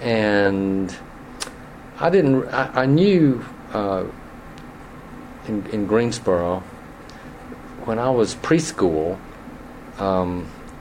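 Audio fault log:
There is no fault to log in this audio.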